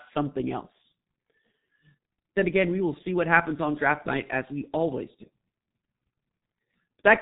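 From start to finish, the speech carries heavy G.723.1 codec damage. Nothing passes above 3.8 kHz, so it sounds muffled. The coarse, slow-updating voice model at a rate near 6.3 kbit/s adds hoarseness. Consonants blur together.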